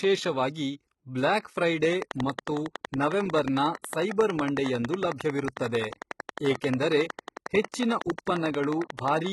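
Speech, carried through heavy codec damage that most likely comes from HE-AAC compression: nothing remains above 11.8 kHz, and the treble below that is rebuilt from copied lower bands, so s sounds turn gritty and metallic rather than simply dull as with a lowpass. That points to a low bitrate near 16 kbps. From 1.93 s to 9.27 s a train of clicks ticks at a regular 11 per second, about seventy in all, peaking about 15 dB above the speech. Much the same shapes at a steady pace, audible in pauses too, separate it from random crackle, and it is likely interference or a faulty connection or supply. At 7.62 s a pre-echo spreads a 25 ms wash of hiss ahead of an attack and softens it. The codec spread its block's quantisation noise back before the transient, so unlike a click the hiss leads into the sound rather than sitting on top.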